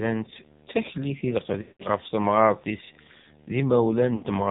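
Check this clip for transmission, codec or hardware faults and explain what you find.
Two faults are present: the whole clip carries heavy AMR narrowband mobile codec damage, and there are two runs of lost AMR speech frames.

The AMR narrowband mobile codec is audible throughout. Nothing above 4 kHz survives, so the speech sounds boxed-in and telephone-like. The codec rebuilds speech from a vocal-tract filter excited by a few pulses per subframe, and here the buzzy, synthetic texture is strong. That degree of damage points to one of the low-rate modes, around 5.9 kbps, where too few bits remain to model the excitation cleanly.

Lost AMR speech frames occur at 1.62 to 1.86 s, just after "taklit i", and at 4.16 to 4.24 s. When frames fail their checksum, the decoder repeats the last good pitch and filter settings with decaying gain. In the first gap, about 180 ms long, the sound smears into a held, fading tone and drops toward silence before speech returns briefly weak and rough. 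The second gap is about 60 ms and produces a short dip and warble. Those lengths fit runs of roughly nine and three 20 ms frames.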